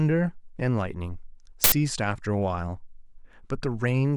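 At 1.64 s the speech is cut by a harsh, very loud burst of digital noise lasting until 1.72 s. This is an uninitialised buffer: an 80 ms block was played before any audio had been written into it, so whatever values remained in memory came out as samples.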